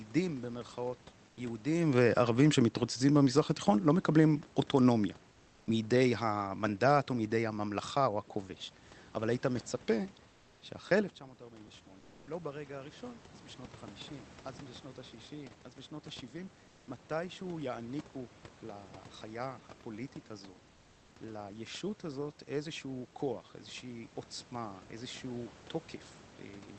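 At 1.29, 10.27, 11.99, 16.67 and 20.71 s, pauses lasting 80 to 440 ms lose their room background. It is replaced by comfort noise, a steady, featureless hiss about 2 to 4 dB quieter, likely from Opus discontinuous transmission. Between 11.19 and 16.52 s, after the speech level at the microphone falls by about 16 dB as the talker draws back, automatic gain rises by about 6 dB. Speech and background swell slowly together over those five seconds.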